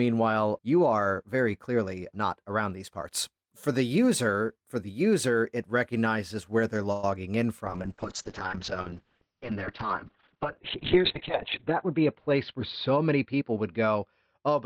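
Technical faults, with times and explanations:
6.92–7.04 s, call audio freeze: packets likely stalled in transit and the jitter buffer ran dry, so the receiver stretched the last sound into a fading buzz for about 110 ms. Nothing is lost; the speech resumes where it stopped, now slightly later.
7.65 s to the end, call bitrate drop: the bandwidth estimate fell and the encoder went from 32 to 8 kbps, with audio bandwidth cut from 20 kHz to 4 kHz. The speech turns coarse and muffled, staying at the lowest rate for about 3.5 s.
11.68–13.57 s, jitter buffer speed-up: with excess audio queued, the receiver trimmed short pitch-period pieces repeatedly, removing roughly a tenth of a second. The speech runs about 5% faster at unchanged pitch, sounding slightly hurried.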